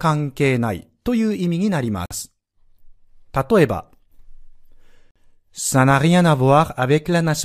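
The speech was delivered in chunks of about 3 seconds, and a gap between chunks opens at each join: 50 ms of silence at 2.06–2.11 s and again at 5.11–5.16 s. Nothing is lost, but the speech stops dead in two holes.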